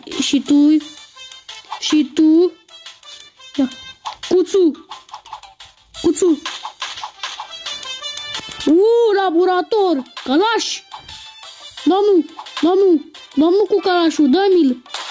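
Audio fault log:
No faults detected.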